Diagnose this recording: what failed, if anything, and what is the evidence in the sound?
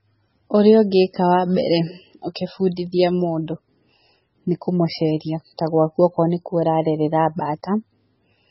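Codec stage: heavy, watery damage throughout, nothing above 5.6 kHz, a flat spectrogram ceiling with flickering gaps, likely from low-bitrate MP3 compression starving bits.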